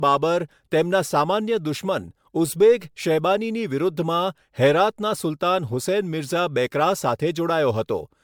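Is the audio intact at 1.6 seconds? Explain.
No, at 1.6 s you're hearing generation loss that runs through the whole clip: swirly, hollow, smeared attacks, likely from about seven MP3 re-encodes stacking quantisation noise.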